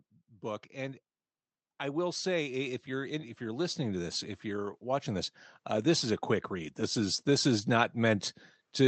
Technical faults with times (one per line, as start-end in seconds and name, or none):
1.79-8.87 automatic gain rising